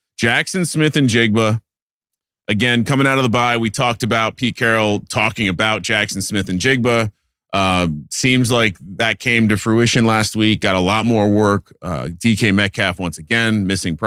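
Speech recording with nothing technically wrong with it, so there are no times or causes to give.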